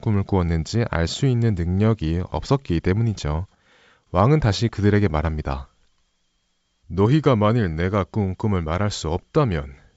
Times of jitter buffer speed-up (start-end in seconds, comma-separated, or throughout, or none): none